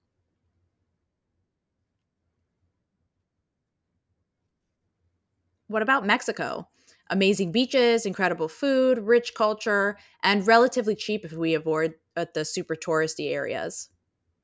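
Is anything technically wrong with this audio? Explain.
No, nothing technically wrong turns up anywhere in this speech recording.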